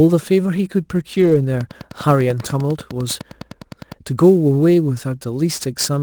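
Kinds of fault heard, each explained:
Sample clock jitter: The converter's clock wobbles, so each sample lands a touch early or late, and the error scales with how steeply the waveform is moving. Here the timing spread works out to somewhere around 10 microseconds, leaving a rough, hissy layer roughly 25 dB under the speech through the whole clip. It gets stronger on loud, bright sounds like sibilants and disappears in the gaps where nothing is being said.
Lost packet rebuilt from error correction: Packets went missing, but each one's successor carried a low-bitrate backup copy (Opus in-band FEC), so the decoder played those instead of leaving a hole. You hear it between about 1.13 and 1.35 s: no dropout, but the speech turns coarser and grittier for roughly 120 ms of rebuilt audio, which points to six separate packets lost, then snaps back to normal quality.
Train of clicks: A steady run of near-identical pulses sits on top of the audio from about 1.61 to 3.93 s, ticking at close to 10 per second with very even spacing, about twenty clicks in all. 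They poke out a few dB above the speech and stay audible in pauses too. That regular, machine-like pace most likely comes from electrical interference from nearby gear or a faulty connection or power supply.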